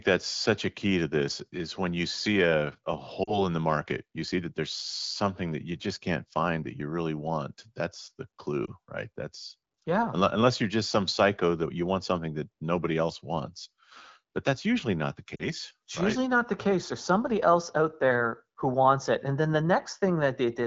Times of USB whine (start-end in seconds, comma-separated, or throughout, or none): none